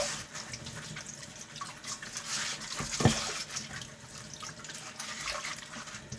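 A short recording of everyday sounds, with nothing technically wrong with it.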